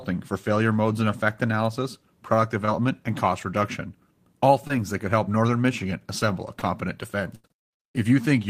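At 2.65, 4.67 and 6.59 s there's short concealed packet loss: about 20 ms dropped each time, patched by extending the previous sound, giving a quick smear. Then at 7.35 to 7.46 s comes a burst of packet loss, roughly 80 ms gone, bridged by a fading continuation of the last sound before the speech jumps ahead.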